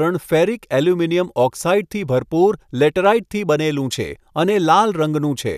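Speech, with no audible technical faults anywhere in the recording.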